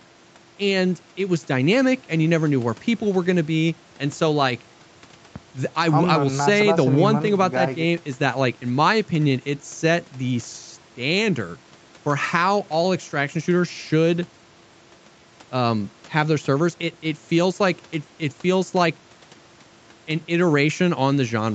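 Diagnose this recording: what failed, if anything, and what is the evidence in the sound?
Nothing has failed: the speech shows the expected signature of a call chain, with the call microphone processing and the WebRTC call path's Opus codec together leaving nothing above 8 kHz, a band limit that fits an Opus link set to 64 kbps with its bandwidth at 8 kHz.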